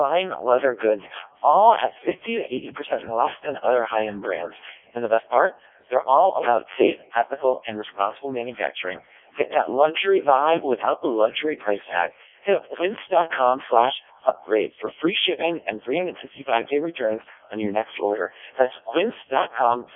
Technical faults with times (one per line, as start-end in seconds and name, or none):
0.00-19.96 Codec 2 vocoder